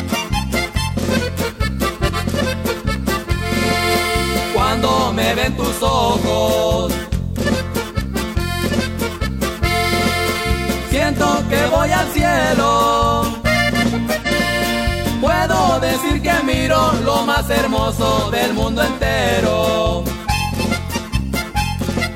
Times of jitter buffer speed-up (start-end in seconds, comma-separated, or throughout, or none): none